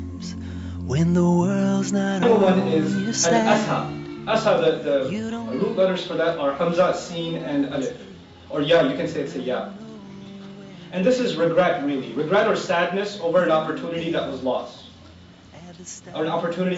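No technical faults can be heard anywhere in the audio.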